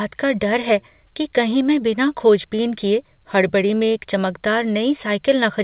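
No technical faults are audible.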